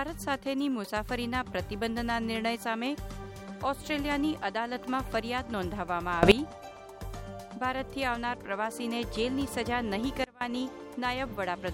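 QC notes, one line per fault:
6.23–6.32 s: sudden gain jump. The level rises by about 18 dB with no ramp, so the sound and its background noise get louder together. The likely cause is a gain setting applied in one step. The waveform envelope steps up abruptly, and the spectrogram brightens evenly across all frequencies.
10.24–10.41 s: sudden gain jump. The level falls by about 24 dB, and the sound and noise floor drop together, likely from an unramped gain change. The waveform shows a sharp step down in amplitude, and the spectrogram dims uniformly at that instant.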